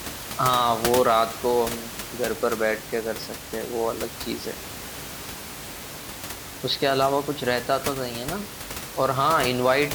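No technical faults are audible.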